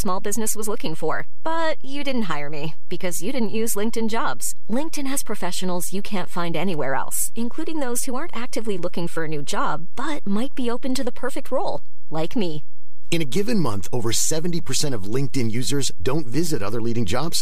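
DC offset runs through this speech clip from start to finish: the waveform sits shifted off zero by a constant of about -14 dBFS, eating headroom and adding inaudible steady energy at 0 Hz.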